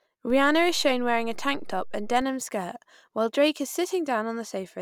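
At 0.30 s a DC step shifts the speech's zero line by about -33 dBFS, heard as a low thump, and the offset ends at 2.22 s. The waveform baseline visibly shifts then returns; the spectrogram shows a brief low-frequency smear at the onset.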